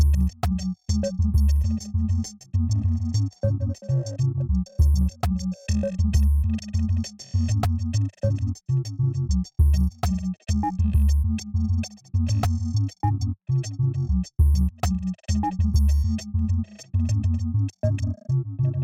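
From start to finish the sound carries a rough, metallic edge, strongest on its brighter components and absent in the gaps. This is periodic clock jitter: interference near 1 kHz wobbles the converter's sample timing, spraying sidebands about 1 kHz either side of every component.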